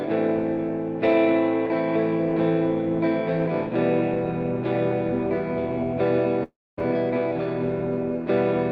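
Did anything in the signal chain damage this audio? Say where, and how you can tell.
Yes, at the network stage, most likely a long network dropout: packets stopped arriving from 6.43 to 6.79 s. The receiver stretched the last sound into a fading buzz or hiss, which sinks to silence for about 230 ms before audio resumes with roughly 340 ms lost.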